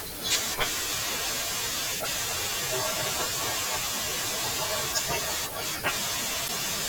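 A brief glitch cuts into the speech from 2.03 to 2.08 s and again from 6.45 to 6.50 s: damaged data in a compressed stream, where corrupted frames make the decoder lose sync.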